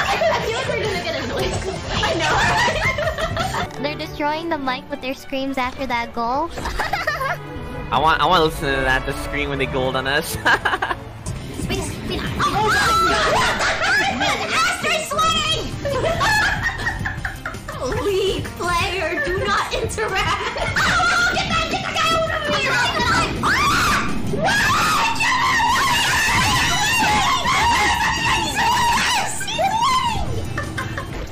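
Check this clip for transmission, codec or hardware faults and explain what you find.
No transmission, codec or hardware faults are audible anywhere in the clip, and the signal holds steady throughout without any dropouts, glitches or interruptions.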